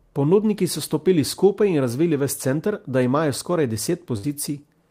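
A speech recording with a burst of packet loss from 4.17 to 4.25 s: the receiver concealed about 58 ms by extending the preceding sound and fading it down, then resumed with roughly 60 ms of the original audio skipped, leaving an audible jump.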